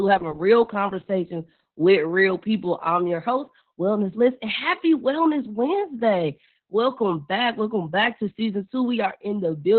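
The speech runs through Opus voice compression for its whole length, squeezed by the SILK coder to what sounds like roughly 8 kbps, with the band cut to about 4 kHz. Heavy damage results: the voice comes out muffled, hoarse and faintly robotic, its excitation coarsely coded.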